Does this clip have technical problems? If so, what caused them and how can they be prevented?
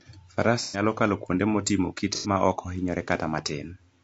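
Yes. The whole speech clip sounds rough and grainy, with noise creeping between the harmonics and a thin top band. That's likely low-delay AAC compression (AAC-ELD), whose short frames smear pitch detail, and the damage points to roughly 32 kbps. Giving the encoder more bitrate would fix it.

There's also AAC frame loss with concealment at 0.62–0.82 s, just before "kalo kuonde motimo", and again at 2.15–2.29 s, between "kalo kuonde motimo" and "maok ohinyore". Each gap becomes a smeared, noisy patch where the decoder is guessing from the last good spectrum. They fit gaps of about 120 ms and 90 ms. A steadier network link, or some forward error correction, would prevent these dropouts.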